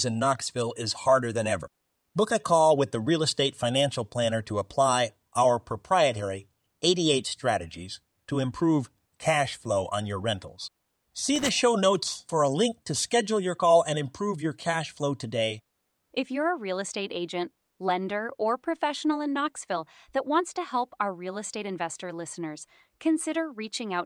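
A short irregular burst of crackle and scratching from 11.36 to 11.49 s is loose connector crackle, a worn contact briefly making and breaking, chopping the signal.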